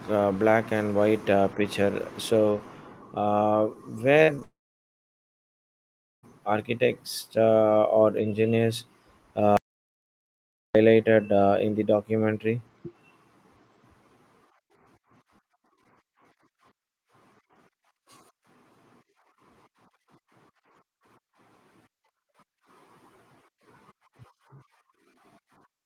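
A speech recording with network and input faults. Short concealed packet loss comes first: about 40 ms, then two 20 ms bursts of audio arrived too late to decode, at 4.23–4.32 s, 4.35–4.40 s and 4.40–4.43 s. The receiver patched each gap by extending the preceding sound, giving brief smears and wobbles. These run straight into a long network dropout from 4.43 to 6.25 s, likely a stall in delivery lasting about 1.8 s. The concealed tail fades within roughly a tenth of a second and leaves about 1.7 s of near-silence before the sound resumes further on, with the missing stretch gone. From 9.57 to 10.75 s an audio dropout to silence, likely a lost input to the recorder, cuts the sound abruptly for about 1.18 s. The gap is silent with no background tone, and whatever occurred then is lost.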